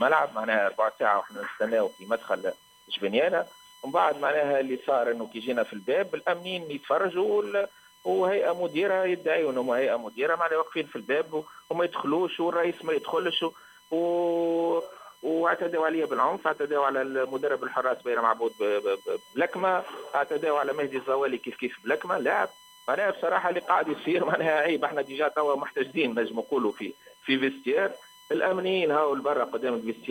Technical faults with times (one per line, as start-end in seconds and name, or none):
0.00-30.10 USB whine